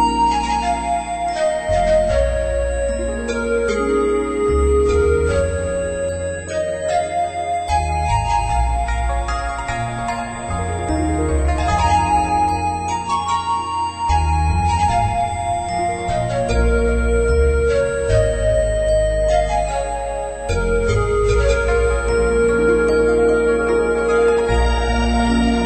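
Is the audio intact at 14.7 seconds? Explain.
No. A USB whine runs through the whole clip, including 14.7 s: current from 125-microsecond bus microframes leaks in, giving a fixed 8 kHz tone, strongest at 16 kHz, roughly 20 dB below the signal.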